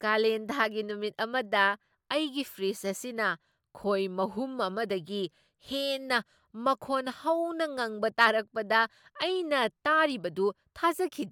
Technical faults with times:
none

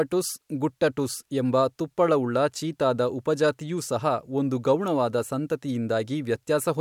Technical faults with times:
none

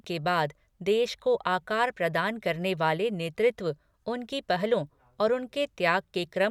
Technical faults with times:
none

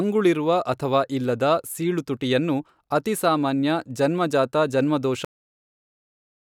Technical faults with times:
5.25-6.57 cut-off end

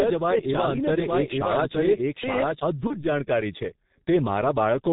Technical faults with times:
0.00-4.93 G.723.1 codec
0.00-2.60 doubled audio track
2.87-3.05 VoIP packet loss concealed by the speech codec

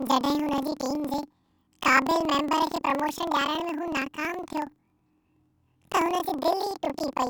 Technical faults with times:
0.00-7.29 planar audio read as interleaved

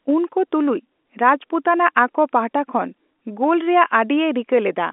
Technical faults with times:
none

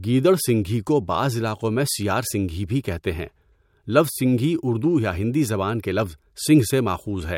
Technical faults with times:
none

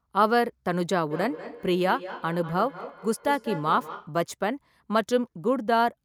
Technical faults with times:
1.11-4.19 feedback echo between two devices

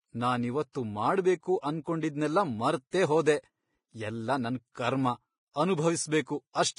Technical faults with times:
0.00-6.79 Vorbis compression
0.72-0.75 pre-echo

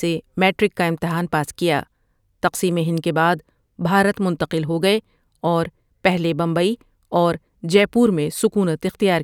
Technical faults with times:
none

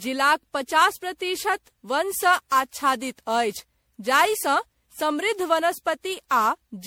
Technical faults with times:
0.00-6.87 generation loss

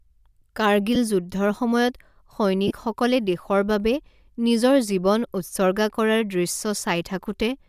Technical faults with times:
0.95 lost LE Audio frames
2.68-2.72 lost LE Audio frames

